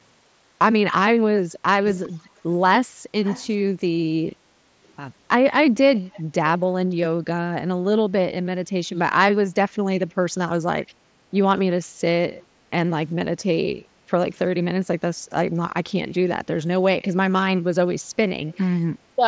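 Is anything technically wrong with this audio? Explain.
Yes. An echo leak: the far end likely plays the call on a loudspeaker, and its echo canceller let some speech back through. A copy trailing 406 ms behind is heard at 1.86–2.27 s, 3.24–3.52 s, 6.12–6.23 s, 12.39–12.43 s and 18.53–18.58 s. It is about 15 dB down at first and fades to about 35 dB down.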